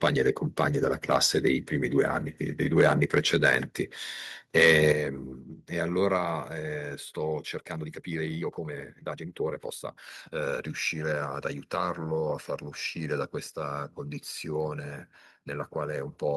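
Microphone overload at 0.03–0.08, 0.60–0.64, 1.11–1.16, 2.78–3.55 and 4.57–4.92 s: peaks run about 2 to 6 dB past the converter's limit, flattening their tops into a harsh crackle, likely from excessive input gain. Microphone volume stepped down at 4.92 s by about 7 dB, then at 6.18 s by about 3 dB: the level drops abruptly, likely an automatic gain reduction reacting to the clipping. A time-stretched section from 7.41 to 10.47 s plays about 1.55 times faster at unchanged pitch, sounding rushed, likely from splicing out short chunks.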